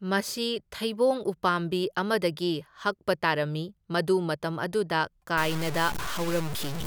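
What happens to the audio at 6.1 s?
At 6.1 s the speech sits inside a stretch of harsh graininess running from 5.38 s to the end of the clip at 6.86 s, the sound of low bit depth without dither. The likely cause is truncation to very few levels, consistent with about 4 bits, leaving error only around ten decibels below the speech. Unlike steady hiss, this grit rises and falls with the speech itself, turning quiet parts rough and sputtery rather than adding a constant noise floor.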